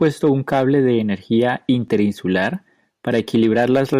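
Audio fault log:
1.88–3.94 s, periodic USB or driver dropouts: about a millisecond of speech is skipped every 1.02 s, giving regular ticks, seen as evenly spaced waveform discontinuities and thin vertical spectrogram lines.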